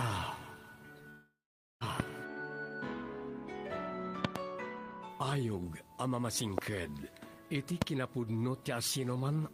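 From 1.09 to 1.84 s, a long network dropout likely stopped audio from arriving for about 0.72 s. The receiver stretches the last sound into a fading buzz, then leaves roughly half a second of silence, and the audio resumes with that stretch simply gone.

A voltage spike, likely from a plug, switch, static or driver glitch, then lands on the signal as a loud pop at 2.00 to 2.02 s, a double pop at 4.25 to 4.38 s, and single pops at 6.58 to 6.60 s and 7.82 to 7.84 s. Each is a sharp crack around 20 to 25 dB above the surrounding sound, which carries on underneath.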